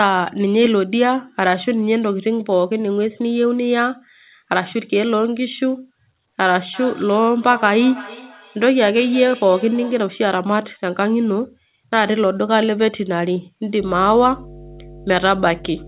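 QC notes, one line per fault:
6.74 to 10.21 s, feedback echo between two devices: each word comes back about every third of a second, thinning and ringing on each pass, peaking at about -17 dB under the speech. A second device in the room is replaying the call into the first one's microphone, and its echo canceller can't remove sound it didn't play itself.
13.81 to 15.88 s, mains hum: a steady 50 Hz drone with some low harmonics runs to the end, fairly strong at roughly 10 dB below the signal. That points to a ground loop or a nearby transformer leaking the power line into the audio, sitting under the call's narrowband sound that stops at 4 kHz.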